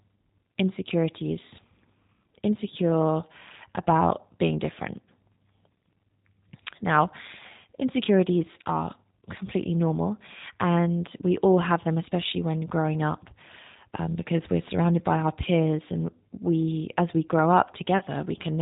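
Throughout, the speech carries plainly audible G.729 codec damage. The band stops at 4 kHz, and the voice has a rough, slightly synthetic texture from being rebuilt by a vocal tract filter, a pitch predictor and sparse pulses, which fits an 8 kbit/s G.729A stream.

From 17.98 to 18.03 s, just after "we as we grow", VoIP packet loss concealed by the speech codec appears. About 30 ms of audio is missing, consistent with a single lost packet. The decoder extends its last pitch and filter with falling gain, so the sound briefly smears into a weakened buzzy tone or coloured noise before real audio returns.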